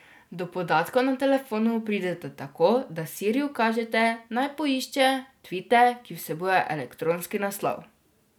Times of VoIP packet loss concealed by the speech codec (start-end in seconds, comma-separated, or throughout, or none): none